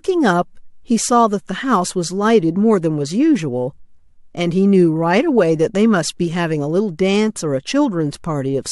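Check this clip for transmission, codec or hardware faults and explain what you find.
Nothing here sounds wrong to me; I listened all the way through this bit of speech and didn't hear a single glitch or fault worth pointing out.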